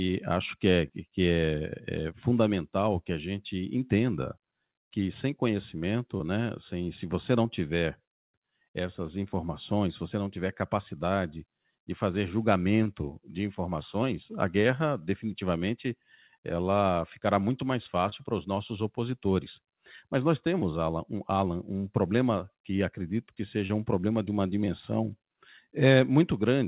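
Speech over a call link whose band stops at 4 kHz, fitting a narrowband G.711 path, carries short concealed packet loss at 0.88 s (after "acho que é"), 6.17, 12.84, 18.10, 20.60 and 23.67 s: about 20 ms lost each time, patched by continuing the prior sound, heard as a brief smear rather than a silent gap or sharp click.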